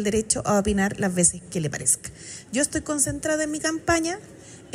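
No technical faults can be heard anywhere in the signal.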